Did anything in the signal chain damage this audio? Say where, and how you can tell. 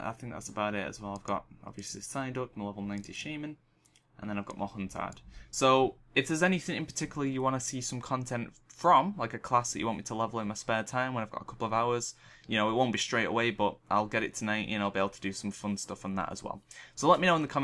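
No, there's no sign of damage from any stage of the signal chain anywhere in this recording.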